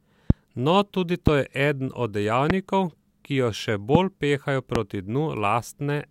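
Single loud pops at 0.30–0.33, 1.27–1.30, 2.50–2.52, 3.95–3.97 s (after "ki jo še") and 4.75–4.78 s. Each is a sharp thump about 20 dB above the speech, which continues uninterrupted underneath, unlike a dropout. The cause is likely a voltage spike from a switch or static.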